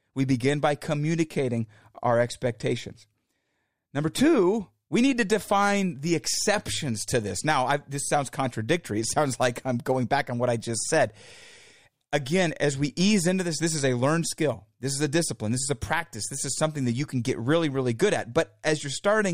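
From 0.22 to 19.30 s, faint clock slip clicks tick about every third of a second. Two unsynchronised clocks likely drift around 70 ppm, slipping one sample each time.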